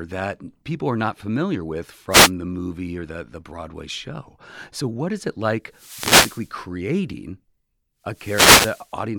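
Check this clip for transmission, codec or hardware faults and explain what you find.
Wireless microphone noise hits at 2.10–2.31 s (between "are not familiar with" and "the movie or the"), 5.71–6.56 s (after "what is it like") and 8.08–8.94 s: the transmitter's FM signal fades as reflections cancel, so receiver noise rises over the speech as a swish of static.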